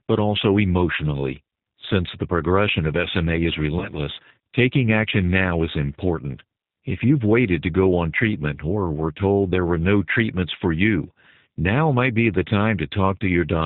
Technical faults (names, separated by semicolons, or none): G.729 codec; VoIP packet loss concealed by the speech codec